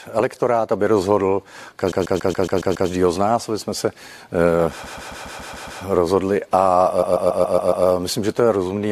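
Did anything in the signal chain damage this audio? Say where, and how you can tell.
Yes: repeated frames in storage or transmission made the decoder replay one 139 ms block, heard as looping stutters at 1.91–2.88 s, 4.83–5.81 s and 7.01–7.85 s.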